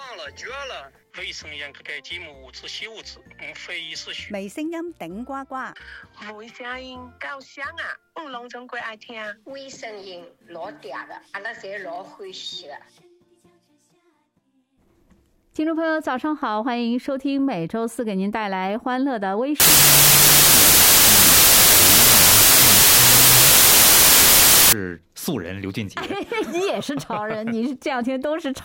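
From 19.6 s to 24.73 s, the audio shows a wrong sample width fault. The stream appears to have been written as 32-bit integers and read back as 16-bit ones, so each original sample is split into two. One half carries the top bits of the real signal and the other is low-order bytes that behave like noise. The result is loud hiss over a buried original, running at half speed and an octave low.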